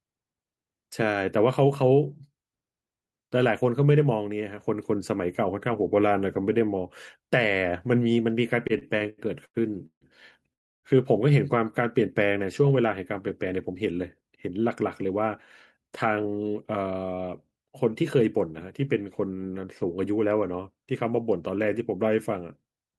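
From 8.67 to 10.04 s the speech shows repeated stalls (stutter): packets kept reaching the receiver late, so its jitter buffer ran dry nine times in quick succession. Each time the receiver stretched the last sound to cover the wait, about 0.42 s in all, the longest single hold 150 ms, so roughly a third of that stretch is filled-in sound. Nothing is lost, but the speech drags and catches, with short smeared or fading holds between pieces.

At 10.53 s comes a call audio freeze. Packets were likely held up in transit long enough to empty the buffer completely. The sound stops and stays silent for about 300 ms until 10.86 s, then resumes where it left off. This inserts a gap of that length rather than cutting anything out, and everything after it is shifted later by the same amount.

The receiver then sheds the built-up delay with jitter buffer speed-up, cutting out many short pitch-period slices while keeping the pitch unchanged. 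From 13.69 to 15.27 s the speech runs at 107% of normal speed, and from 15.77 to 16.56 s at 113%, each pass trimming around a tenth of a second. A shorter pass at 110% from 21.50 to 21.81 s trims a few hundredths more. In these spans the speech sounds rushed, at the same pitch.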